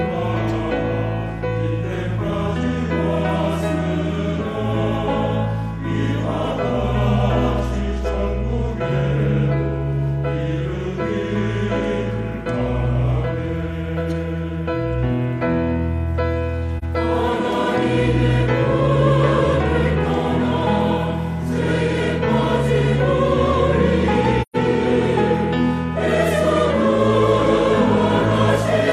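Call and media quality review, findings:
AAC frame loss with muting at 16.78 s and 24.41–24.56 s. Soft-edged dropouts of about 43 ms and 128 ms, fitting one and three lost frames. Decoder zeroed the spectrum; window overlap fades the edges.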